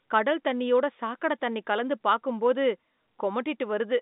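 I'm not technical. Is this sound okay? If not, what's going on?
Yes, this sound is okay, and nothing is going wrong in it.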